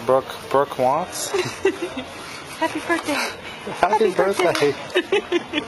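At 0.93 s an adaptive stream at a lower bitrate takes over without a gap. Treble abruptly turns synthetic and smeared, suggesting a low-bitrate HE-AAC fallback. Spectrograms show a sudden high-band change.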